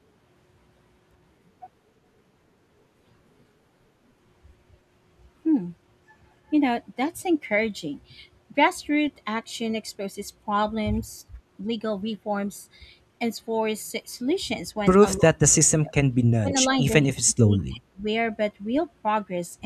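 A speech recording in which the talker's level sinks in short bursts at 11.22–11.27 s, 15.18–15.41 s, 15.8–16.21 s, 16.41–16.54 s, 16.88–17.04 s and 17.23–18.07 s, by as much as about 30 dB and only slightly at 16.9 s. This is speech suppressed in double talk, likely from an echo canceller ducking the near talker while the far side spoke.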